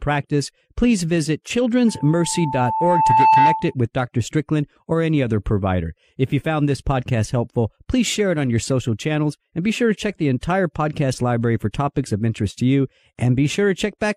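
At 1.87 s a loudspeaker feedback squeal begins in the speech. A microphone is picking up the loudspeaker it feeds. At one frequency, near 883 Hz, the gain around that loop exceeds one. That tone reinforces itself on every pass. It swells over roughly one and a half seconds into a steady squeal, about 5 dB above the speech. The squeal stops at 3.74 s, when the loop no longer sustains it.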